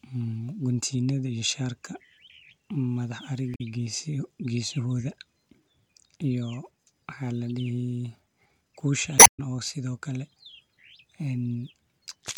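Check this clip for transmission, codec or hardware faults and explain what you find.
Two codec glitches. Damaged data in a compressed stream shows up at 3.54–3.61 s and 9.16–9.40 s: corrupted frames trip the decoder, which loses sync and produces a short chirp, squawk, click or hole while hunting for the next frame.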